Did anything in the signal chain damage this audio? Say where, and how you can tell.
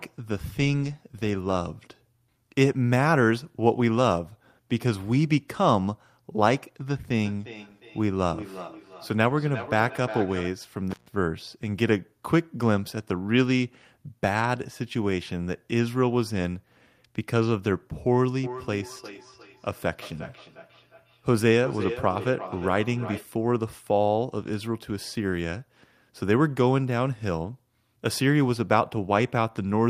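Yes. From 7.21 to 10.61 s, and again from 18.44 to 23.33 s, each phrase comes back at an interval of roughly 0.4 s. The repeats reach about -13 dB below the direct speech, and each return sounds thinner and more ringing. This is feedback echo between two devices, a call-processing fault. A second device in the room plays this line's audio, and the microphone picks it up again. The local echo canceller only removes its own playback, so it can't catch this loop.

At 10.91 s the signal drops out for about 147 ms, with crackle at both edges and only faint hiss in the gap. That is an intermittent contact in the analogue wiring, most likely a loose plug or cable that opened briefly and then closed again.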